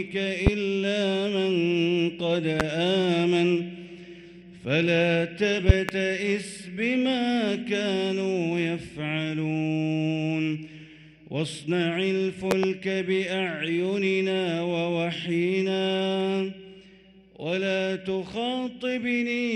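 Loud pops strike at 0.47 s and 2.60 s, then as close pairs from 5.69 to 5.92 s and 12.51 to 12.67 s. Each is a sharp thump, roughly 20 dB above the sound, which continues beneath. The likely cause is sudden voltage steps from a plug, switch, static or driver glitch.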